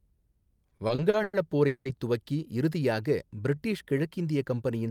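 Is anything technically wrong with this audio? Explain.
Yes, two problems. From 0.69 to 1.87 s there are repeated stalls (stutter): packets arrived late, so the buffer kept emptying and the last sound got stretched over seven gaps, up to 180 ms long. Then from 2.80 to 3.99 s there's a jitter buffer slow-down: the receiver repeated pitch periods to rebuild its reserve, so the audio drags at 93% speed, 94 ms longer, with the same pitch.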